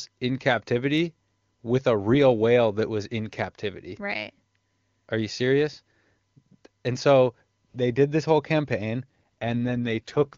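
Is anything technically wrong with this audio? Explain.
Yes. From 9.04 s to 10.37 s, right after "did this whole campaign", there is an AMR rate drop in the AMR wideband (HD Voice) stream, whose speech before that point is clean. The codec switches to a much lower mode, consistent with a step from 23.85 to 8.85 kbit/s, as a weak radio link shifts bits toward error protection. The speech turns rough, buzzy and synthetic to the end. Unlike a fallback to narrowband, the bandwidth stays the same, and unlike packet loss, there is no gap.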